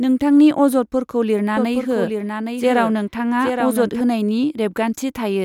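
Right after "नोंथांनि अजदफोरखौ", at 1.57 s, a doubled audio track appears and runs until 4.01 s. A second full-band copy of the speech trails the original by about 0.7 s, a few dB quieter, with no decay or room colour, so it sounds like a dry, out-of-step overlay. The likely cause is an edit holding two misaligned copies. On a spectrogram, the harmonic patterns repeat shifted right by that fixed gap, beginning and ending with hard edges.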